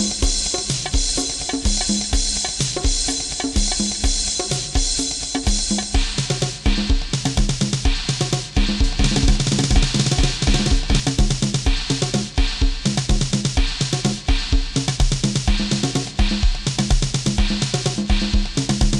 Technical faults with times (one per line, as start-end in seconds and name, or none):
8.84-11.00 doubled audio track